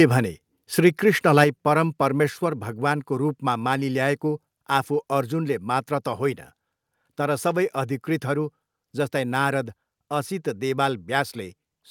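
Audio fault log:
1.38–1.43 s, microphone overload: The input level was likely set high enough to push the peaks about 4 dB past the converter's ceiling, so a small fraction of samples were flattened at the converter's limit for this 50 ms stretch. Squaring off the waveform tops this way adds a burst of harmonics the speech never had, heard as a brief harsh, crackly edge on the loudest moment.
1.44 s, microphone volume stepped down: Right after that distorted peak, the call software likely reacted to the overload by cutting the device's input gain in a single step of about 5 dB. Because the change hits the whole microphone signal at once, the speech and the room noise behind it both drop abruptly rather than fading, leaving an audible downward jump in level from this point.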